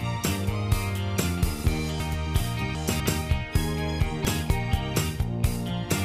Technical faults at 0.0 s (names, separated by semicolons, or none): none